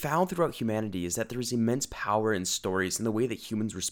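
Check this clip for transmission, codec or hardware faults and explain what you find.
Nothing in the speech points to a fault, as the signal stays continuous and steady throughout.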